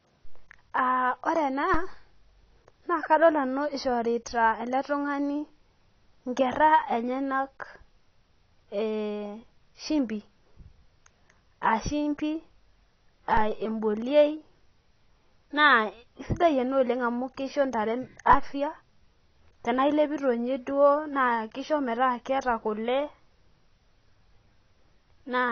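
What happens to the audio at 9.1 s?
At 9.1 s the speech is dull and smeared, with a warbling, fizzy edge on sibilants. This isn't a local event; it runs through the whole clip. It is likely AAC compression: at a low bitrate, which fits about 24 kbps, the encoder discards high bands and quantises the rest coarsely. On a spectrogram nothing appears above 6.5 kHz, a hard ceiling.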